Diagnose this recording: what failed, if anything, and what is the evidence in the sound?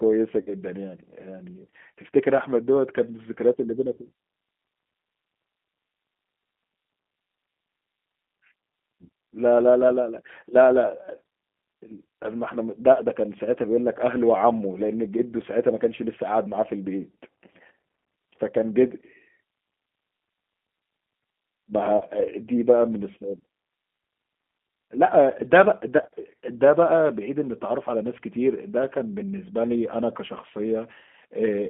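The codec stage failed: the speech passed through a G.729 codec. The band is cut to roughly 200 Hz to 3.4 kHz, so there is no air or sibilant top. The damage is plainly audible throughout. Vowels sound rough and slightly synthetic. The decoder rebuilds each short frame from a vocal tract filter, a pitch estimate and a few pulses, and the result points to an 8 kbit/s G.729A stream.

The network dropped packets, and the codec hid the gaps with VoIP packet loss concealment. There are three events: 0.41 to 0.56 s, 21.97 to 22.06 s, and 26.02 to 26.07 s. The first covers 60 ms of lost audio, which fits three 20 ms packets. The other two cover 40 ms each. In each gap the decoder repeats its last pitch and filter with falling gain. The speech smears into a buzzy tone or coloured noise that fades, and takes a moment to recover once packets return.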